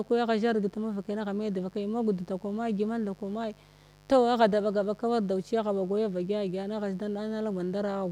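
A steady, raspy buzz sits under the speech from start to finish, roughly 30 dB below it. This is mains buzz: sharp switching spikes from 50 Hz mains, arriving twice per cycle, leak into the signal path and spread harmonics up into the kilohertz range.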